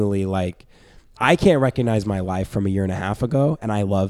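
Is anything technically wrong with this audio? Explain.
No, nothing technically wrong can be heard in this speech recording.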